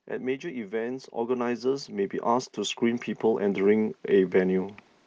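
Automatic gain rising runs from 0.41 to 4.63 s in this speech recording. The gain control judged the input too quiet and steadily raised its level by about 17 dB, so the voice and background noise swell together across those four seconds.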